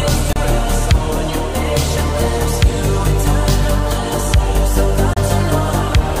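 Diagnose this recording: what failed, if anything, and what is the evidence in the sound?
Damaged data in a compressed stream, at the codec stage: two short glitches, 0.33–0.37 s and 5.14–5.18 s, each about 40 ms. Corrupt bytes made the decoder misread frames and resynchronise at the next header.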